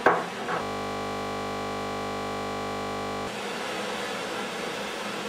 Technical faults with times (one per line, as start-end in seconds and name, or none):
0.62-3.27 system hang loop